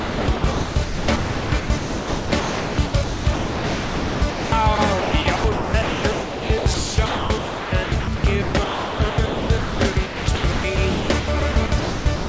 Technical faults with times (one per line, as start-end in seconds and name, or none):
0.00-12.29 sound chopped by the voice detector